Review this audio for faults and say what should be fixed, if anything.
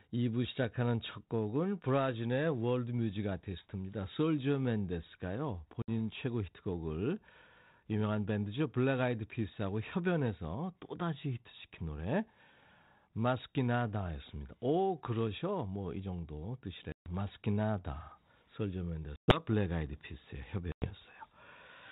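Packet loss on an ADPCM call shows up four times: at 5.82 to 5.90 s, 16.92 to 17.11 s, 19.16 to 19.42 s and 20.72 to 20.91 s, with gaps of about 60, 140, 120 and 100 ms. Each is a hard-edged silent hole, a few packets' worth, after which the speech returns with brief, slight distortion. That happens because the decoder's adaptive predictor and step size drift away from the sender's and need some tens of milliseconds to realign. A plain mute would resume cleanly, and concealment would fill the hole, so the rough recovery is what marks this fault. The light, band-limited codec character around it points to 32 kbit/s G.726. To prevent it, carry the call over a link with jitter buffering and loss concealment that also resets or re-syncs the ADPCM decoder state after a gap.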